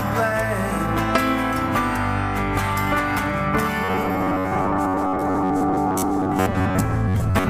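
From 3.84 s until the end at 7.50 s, the audio takes on robotic sound from repeated short buffers: a rigid, metallic buzz at about 93.8 Hz that still loosely tracks the underlying sound. The likely cause is audio arriving too seldom, so segments of roughly 10.7 ms are replayed to fill the gaps, with about half the material being repeats. A spectrogram shows an even comb of horizontal harmonics spaced 93.8 Hz apart, and the waveform shows identical cycles recurring every 10.7 ms.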